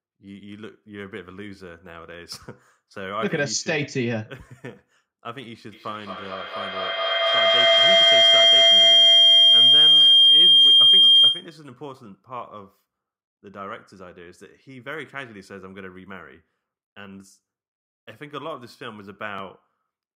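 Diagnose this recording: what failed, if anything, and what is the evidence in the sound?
Feedback howl runs from 5.72 s to 11.67 s. The stage is the acoustic path around the call: a second device in the same room feeds the loudspeaker output back into a microphone with net gain above unity. The evidence is a tone near 3 kHz that swells to about 17 dB above the speech and pulses at roughly a fifth of a second, the loop's round-trip delay, until the loop is broken.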